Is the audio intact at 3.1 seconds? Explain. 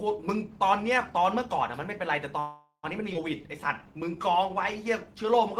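No. A skip ahead occurs at 3.13 to 3.16 s. Roughly 150 ms of speech was discarded while later audio was already queued, so playback jumps forward, bridged by only a 10 ms fill, and the two sides butt together almost directly.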